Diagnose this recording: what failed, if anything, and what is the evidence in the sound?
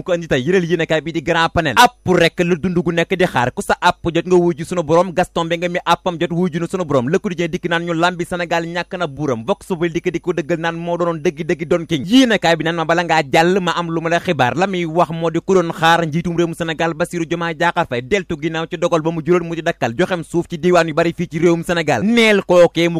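Nothing in the recording points to a failure at any stage of the chain. The sound runs without any audible break, distortion, dropout or timing problem to trace back to a cause.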